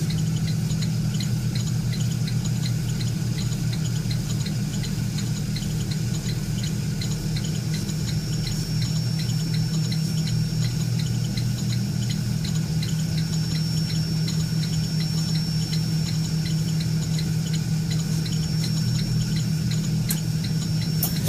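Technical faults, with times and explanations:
6.98–21.28 s, feedback whistle: A thin, steady tone at 5.5 kHz appears and carries on to the end. It sits roughly 15 dB below the main sound, so it stays in the background. Its level swells and fades slowly but never builds up. This is likely a loudspeaker-to-microphone loop held just at the edge of feedback. One high frequency keeps recirculating, and it is neither damped out nor growing into a howl.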